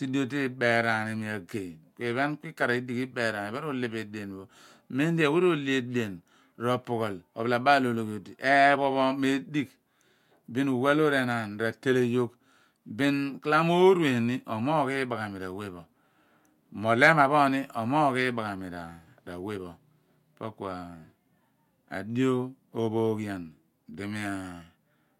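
Nothing stood out on listening to this speech recording.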